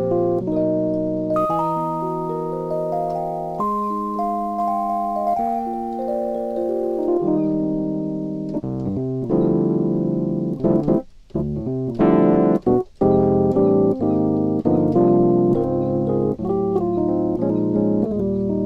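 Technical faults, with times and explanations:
1.34 to 7.07 s, sample clock jitter: the converter's timing wobbles by a few microseconds, so each sample lands slightly early or late. That error tracks how steeply the waveform moves, giving a gritty hiss roughly 35 dB below the sound that swells on loud, bright passages and disappears in the gaps.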